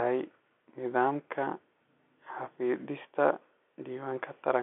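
Nothing's amiss here: it's speech carried over ordinary G.711 telephone coding, so the sound sits in the narrow line band of roughly 250 Hz to 3.4 kHz with nothing above about 3.8 kHz, just as a normal phone call would.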